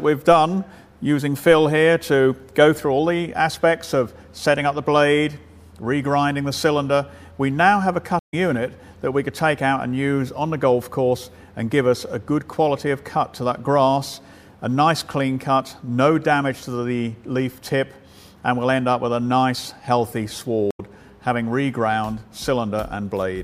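The audio has two stream reconnect faults, at 8.19 to 8.34 s and 20.71 to 20.80 s. The connection drops, leaving 132 ms and then 80 ms of silence, and a fresh decoder restarts playback roughly 0.15 s and 0.05 s later in the stream. Waveform and spectrogram show a clean blank gap and an abrupt jump.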